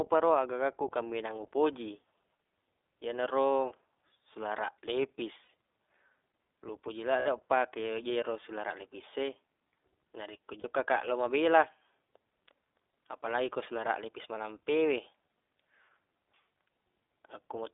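The speech passes through the iLBC codec, narrowband coding that fits the 15.2 kbps, 20 ms-frame mode, so nothing survives below about 300 Hz or above 3.6 kHz. The voice sounds boxed-in and plainly rough, with a synthetic edge throughout.

Lost iLBC frames then make the decoder fill gaps by repeating the last pitch cycle mixed with noise: at 5.44 s for about 40 ms, at 7.20 s just after "lo upoji" for about 60 ms, and at 10.60 s for about 40 ms before "kaq lo". Each sounds like a brief held, breathy vowel, recovering almost at once.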